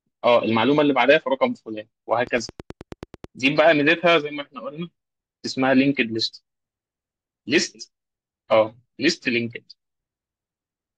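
From 2.27 to 3.25 s, a train of clicks ticks through the speech: about ten matching pulses at a steady 9.3 per second, roughly as loud as the speech. Their even spacing and much the same shape, unlike random crackle, point to likely interference or a faulty connection.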